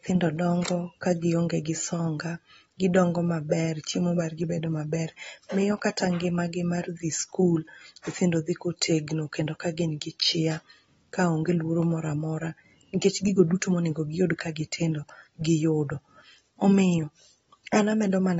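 The speech carries AAC compression damage from start to finish. Nothing reaches above about 7.7 kHz, so the top of the spectrum is simply missing. The sound is dull and smeared. Sibilants turn fizzy, and sustained sounds warble. The damage is plainly audible. The likely cause is AAC-LC encoding at a low bitrate, around 24 kbps. At that rate the encoder lowers its cut-off and leaves holes in the spectrum.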